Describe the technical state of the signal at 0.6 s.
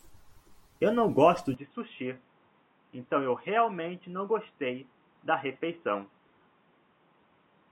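At 0.6 s the speech signal is intact, with no audible fault at that moment.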